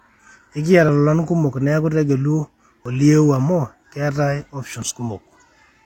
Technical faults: overlap between stream segments

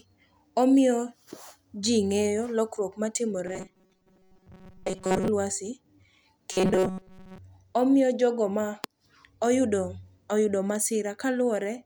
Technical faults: robotic sound from repeated short buffers

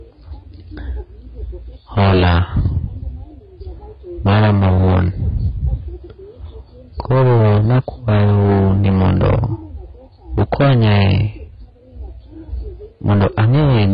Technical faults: AAC compression; hard clipping

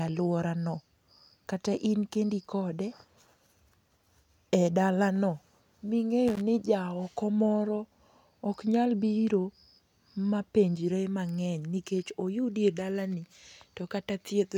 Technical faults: loose connector crackle

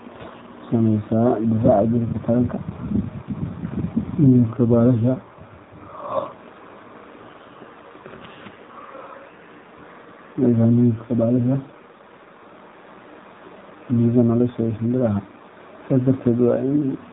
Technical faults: AMR narrowband mobile codec

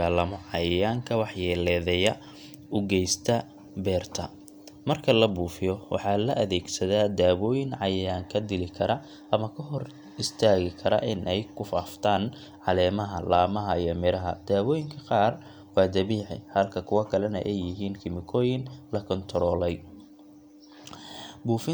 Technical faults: none

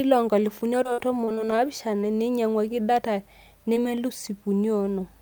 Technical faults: repeated packet loss (robotic sound); short concealed packet loss

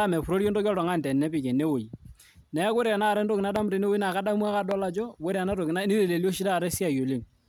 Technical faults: loud pop

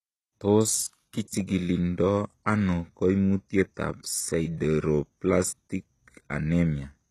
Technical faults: HE-AAC compression; pre-echo

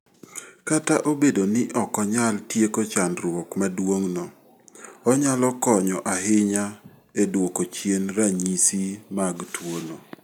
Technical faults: none

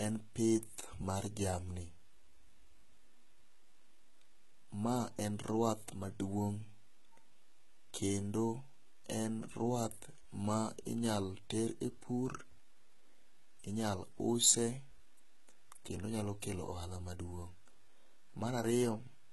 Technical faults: HE-AAC compression

